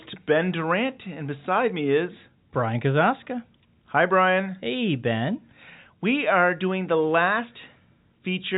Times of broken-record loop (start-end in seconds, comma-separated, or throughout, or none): none